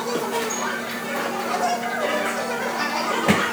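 Audio read two samples at a time (double speed) runs throughout this recording of sounds: pairs of samples are taken as single frames, so everything plays twice as fast and a full octave (12 semitones) high.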